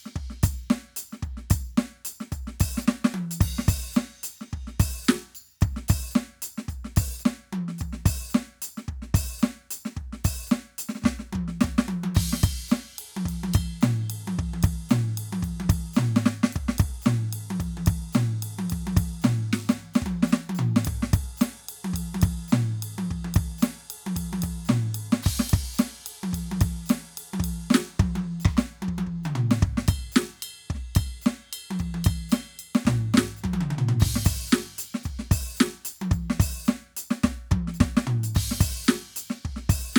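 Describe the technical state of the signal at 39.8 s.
At 39.8 s the music plays through intact, with no audible fault at that moment.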